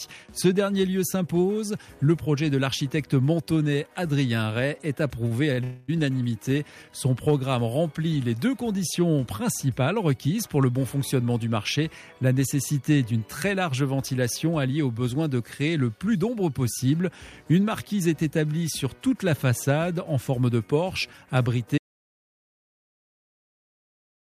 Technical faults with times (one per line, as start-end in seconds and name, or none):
5.27-5.60 short stall from a late packet
5.64-5.90 call audio freeze
21.78-24.30 audio dropout to silence